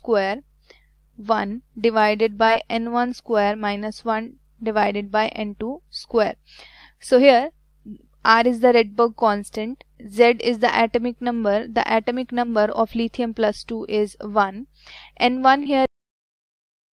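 The audio has two short concealed packet losses, at 2.45 to 2.49 s and at 15.63 to 15.67 s. Each gap is 20 ms, which fits a single lost 20 ms packet. The decoder patched the holes by extending the preceding sound, for about 13 ms in the first case and 27 ms in the second, then crossfaded back to the received signal. The result is a brief smear or wobble, and a short transient falling inside either gap may be lost. The file also has a cut-off end at 15.86 s. The final buffers were never written, so the sound stops mid-event with no decay and drops straight to digital silence for the remaining second or so. That abrupt edge can produce a click at the cut point.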